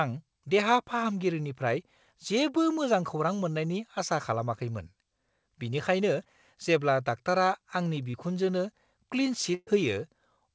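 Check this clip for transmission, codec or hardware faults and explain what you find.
Three packet-loss events are audible in this speech clip, two short concealed losses and one longer burst. They play over the band-limited sound of the call path, where nothing reaches above 8 kHz, which fits a wideband codec such as G.722 at 64 kbps.

Short concealed packet loss occurs at 6.23–6.28 s, just before "जेब्ला डाक्टारा आंनि", and at 8.11–8.16 s, just after "बिनिखायनो जेब्ला डाक्टारा आंनि". Each time about 30 ms of audio failed to arrive in time. The receiver extended the preceding sound over roughly 20 ms and then crossfaded back into the real signal. The result is a brief smear or wobble in the speech.

A burst of packet loss runs from 9.54 to 9.70 s, with about 120 ms of audio lost. The decoder synthesised a continuation of the last sound for about 120 ms, attenuating it as the gap lengthened, and left about 20 ms of silence. 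Speech then resumes further along, so the sound carries a held, fading tail followed by a jump over the missing section.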